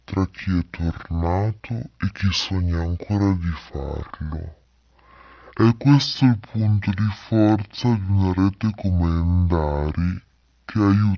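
Wrong sample rate, throughout the whole recording: this speech plays at exactly half speed and a full octave (12 semitones) low, so the voice sounds deep, slow and drawn out from start to finish. Pitch and tempo have dropped by the same factor of 0.5, which points to the samples being read out at half the rate they were captured at, with no conversion. That fits audio recorded at 32 kHz but played back at 16 kHz.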